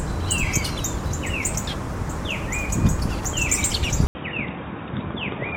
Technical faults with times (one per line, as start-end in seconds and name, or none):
4.07-5.57 input switched to a poorer device